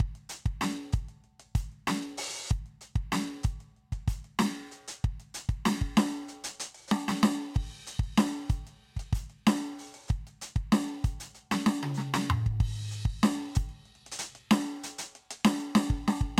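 Music, with no audible faults.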